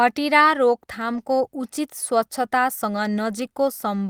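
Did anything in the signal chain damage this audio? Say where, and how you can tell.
Yes, at the network stage: lost packets rebuilt from error correction, from 1.05 to 1.19 s and at 2.95–2.97 s. The speech turns briefly rougher and noisier without a dropout, and the longer stretch fits four lost packets. Unlike plain concealment, nothing smears or fades, because the decoder played lower-bitrate copies carried in the following packets.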